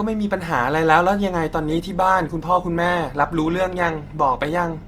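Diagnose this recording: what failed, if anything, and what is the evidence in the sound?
The network stage failed: the adaptive stream dropped to a lower bitrate. At 1.68 s the speech quality changes suddenly, with no gap, and stays degraded to the end. Codec artefacts rise, which points to a switch from about 64 to 16 kbit/s Opus.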